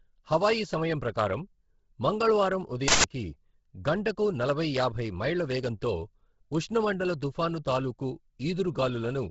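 From the start, the speech has a breathy, grainy edge. Nothing is heard above 7.7 kHz. The upper band sounds thin and hissy, as if noise stands in for real detail. The damage is heavy and runs to the end. This is likely Bluetooth LC3 compression. The codec works in short frames, here consistent with 10 ms. At a low bitrate, around 16 kbps by the sound of it, it discards much of the top spectrum and patches it with noise.

At 2.88 s a loud burst of digital noise cuts in. It lasts 160 ms, ending at 3.04 s. This is an uninitialised buffer. A block of audio memory was sent to the output before any sound was written into it. Whatever junk sat in that memory was played back as samples. The result is harsh, abrupt noise with no relation to the speech around it.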